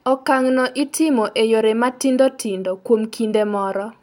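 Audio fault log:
Nothing to log here, as the speech comes across without any technical faults to point to.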